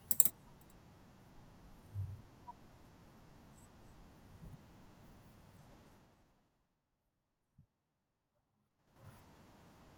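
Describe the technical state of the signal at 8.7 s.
Zipper noise runs from 8.70 to 9.05 s. The speech level changes by roughly 25 dB in unsmoothed steps of about 6 dB, around ten a second. Each jump leaves a small click, so a ticking zip rides on the speech while the level moves.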